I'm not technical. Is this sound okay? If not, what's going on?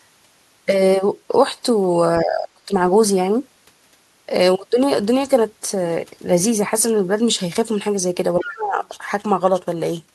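No. The speech drops away twice, from 2.18 to 2.71 seconds and from 8.37 to 8.82 seconds. Each time it goes very quiet for about half a second and then comes back. This is speech suppressed in double talk. It likely happens when both people talk at once on a call. The echo-cancelling system can't tell this voice apart from the other person's echo, so it turns everything down.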